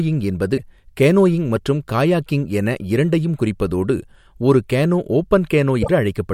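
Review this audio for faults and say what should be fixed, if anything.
At 0.56 to 0.59 s and 5.81 to 5.89 s the speech jumps ahead with a brief disturbance lasting roughly one and three 26 ms frames. This is likely a broken MP3 bit reservoir: frames after a cut look back for borrowed data that is no longer there. A plain dropout would resume exactly where it stopped, with no skip forward. To prevent it, cut or splice MP3 streams only at points the bit reservoir does not cross, or edit from an uncompressed source and re-encode.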